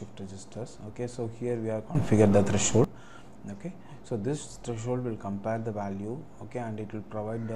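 The audio has a sudden gain jump from 1.95 s to 2.84 s. The level rises by about 15 dB in a single step, with the background noise lifting along with it. It then drops back. The likely cause is a gain change applied without any ramp.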